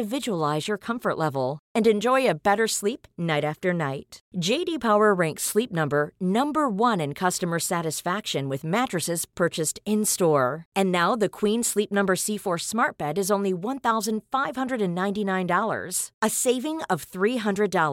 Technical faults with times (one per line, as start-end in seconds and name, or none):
none